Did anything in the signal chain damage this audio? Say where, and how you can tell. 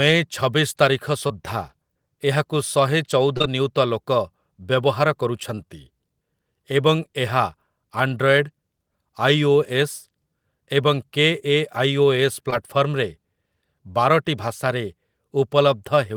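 Yes. The damage happened in the network stage, and it is short concealed packet loss. Brief smears or wobbles occur at 1.27 s, 3.37 s, 3.42 s, 5.55 s and 12.50 s. Each marks about 20 ms of sound that never arrived in time. The pair at 3.37 s and 3.42 s runs back to back. The decoder continued the last sound to fill each gap, then blended back. At 5.55 s the fill adds a little extra time.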